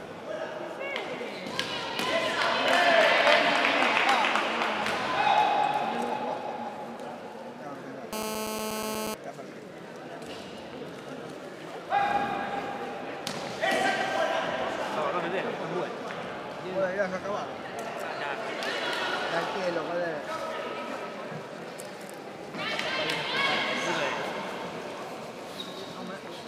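GSM phone buzz runs from 8.13 to 9.14 s: a nearby 2G handset on a call transmits bursts about 217 times a second, and the audio circuitry rectifies them into a steady, hard, raspy 217 Hz buzz, rich in harmonics, about 3 dB below the sound.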